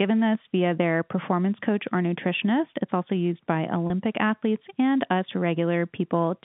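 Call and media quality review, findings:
DC step: low thump at 0.35 s as the zero line jumps, a second as it steps back at 1.97 s, again at 3.76 s holding to the end. Converter recalibration or an offset input switched in. Unlike handling noise, the speech itself is untouched.

Packet loss with pitch repetition: 3.87 s, a 30 ms gap consistent with one lost packet, bridged by the receiver repeating the last pitch period. Heard as a short held, buzzy tone, not a thump. The G.711 A-law band, about 150 Hz to 3.6 kHz, is intact around it.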